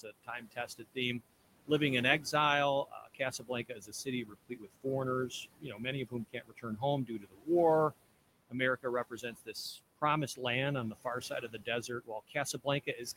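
Speech in which the room noise, sitting about 15 dB below the speech, sinks between phrases and swells back beneath them: noise suppressor artifacts, from a suppressor cutting steady noise by about 21 dB frame by frame. Parts of the speech sound swallowed and faint at 0.03–1.21 s, 2.85–4.86 s, 5.29–7.49 s, 8.49–10.03 s (ending just before "land on") and 10.92–13.17 s (after "land on"). In each of the first four stretches, roughly half a second to a second of quiet speech drops by about 20–21 dB, and the last stretch drops by about 20 dB. This is speech cut by the noise suppressor, which mistook those quiet parts for background.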